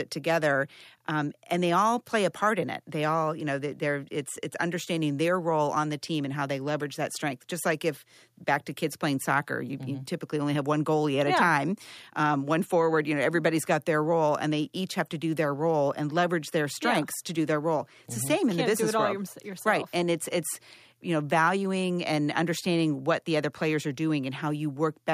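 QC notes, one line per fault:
No fault to list in these QC notes.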